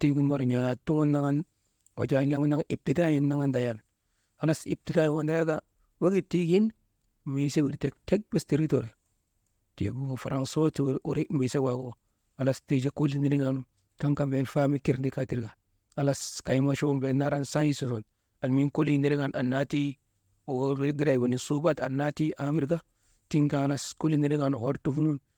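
Listening through this speech recording, nothing technically amiss stood out.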